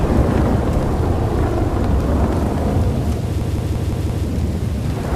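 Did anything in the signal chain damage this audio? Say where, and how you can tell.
Yes, at the driver or buffer stage. From 3.41 s to 4.27 s there's a system hang loop: one chunk of about 171 ms plays five times back to back, giving a stutter at about 5.9 Hz. The system stalled while the audio hardware kept cycling through the same ring buffer, and that loop length fits an 8192-sample buffer. When it picks up again, essentially nothing seems to be missing.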